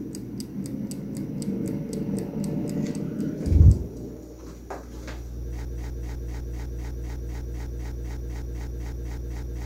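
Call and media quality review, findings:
Broken-record loop, 5.65 s to end of clip. A 0.25 s fragment repeats back to back, 16 times, with no variation. Likely cause: stalled player, encoder or stream re-sending its last held buffer. Audio due after 5.65 s is lost. Waveform shows an identical block tiled every 0.25 s. Spectrogram shows the same pattern stamped in vertical stripes at a fixed 0.25 s pitch through to the end.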